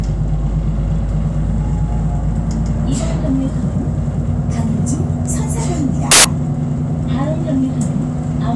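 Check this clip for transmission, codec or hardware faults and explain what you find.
One fault is present. At 6.11 s a sudden burst of very loud white noise with hard edges cuts in and stops at 6.25 s, about 130 ms later. This is file tags played as audio: an embedded cover picture, stored as compressed data, was read out as samples, so its dense bytes emerge as loud static.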